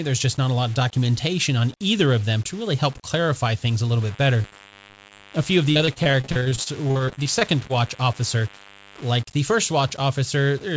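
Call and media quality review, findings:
Low bit depth without dither, whole clip: grainy, signal-following distortion about 25 dB below the speech, quiet passages gritty, decays sputtering between steps. Likely cause: undithered rounding to about 7 bits at a gain or format-conversion stage.

DECT cordless phone buzz, 4.02–9.22 s: thin steady 100 Hz buzz with dense harmonics, about 25 dB below speech. Nearby DECT handset or base emitting 10 ms radio bursts, rectified in the analogue mic or line circuitry.

Repeated packet loss (robotic sound), 4.42–5.21 s: choppy speech from 8 short dropouts, each under 40 ms, concealed by extending prior audio. Roughly a fifth of the span is synthesized. Jitter buffer or network loss on the call path.

Repeated packet loss (robotic sound), 5.71–7.71 s: same robotic chop, denser, with 23 gaps of up to 40 ms covering about a quarter of the span. The call runs over the G.722 path, band-limited to 8 kHz.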